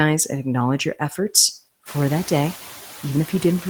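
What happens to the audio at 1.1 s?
At 1.1 s you're hearing noise suppressor artifacts, which run through the whole clip. The suppressor pulls down whatever bands it reads as steady noise, frame by frame, by about 5 dB, so the background sinks in the gaps and creeps back up under the speech.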